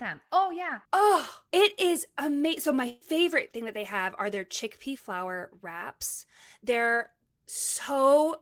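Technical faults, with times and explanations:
2.89–3.04 s, burst of packet loss: the speech freezes into a held, fading sound for about 116 ms, then resumes with roughly 120 ms skipped. Lost packets left the receiver continuing and turning down the last sound until fresh audio arrived further on.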